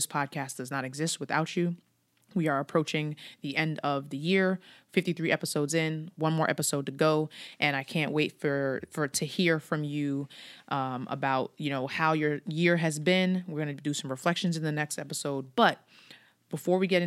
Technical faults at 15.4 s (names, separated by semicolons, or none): none